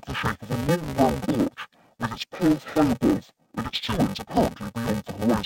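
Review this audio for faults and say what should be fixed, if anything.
Interleaved audio read as planar, throughout the speech. Each short block of stereo data, about 2.9 ms long, which fits a 128-sample block, has its alternating left and right samples split, so the first half goes to the left channel and the second half to the right. Each half plays at half speed, which keeps the overall pace correct. Because the blocks are so short, the voice sounds dull and robotic with a buzz at about 345 Hz and no clear octave drop. To prevent it, set the reader's channel layout to match the interleaved format the source delivers.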